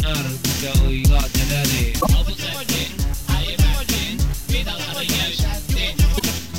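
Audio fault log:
1.97–2.07 s and 6.15–6.22 s: damaged data in a compressed stream. Both are short bursts of under a tenth of a second. Corrupted bytes make the decoder misread those frames and lose sync while it looks for the next valid header, so each one comes out as a brief glitch.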